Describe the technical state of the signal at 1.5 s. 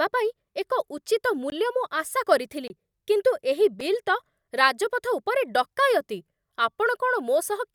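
A short hole cuts into the speech from 1.50 to 1.52 s. This is a block of digital silence: about 20 ms of the sound cuts straight out and back with no fade, which points to an output buffer not being filled in time.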